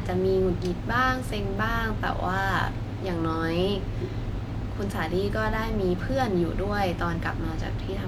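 No technical faults occur at any point in this speech.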